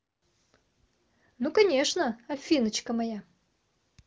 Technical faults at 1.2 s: none

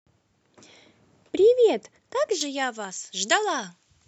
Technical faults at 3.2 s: pre-emphasis left on

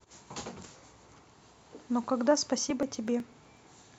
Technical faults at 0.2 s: none

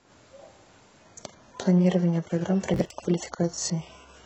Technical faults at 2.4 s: adaptive stream at a lower bitrate

